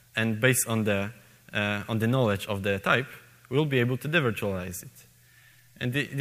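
No technical faults can be heard anywhere in the signal, which holds steady and continuous throughout.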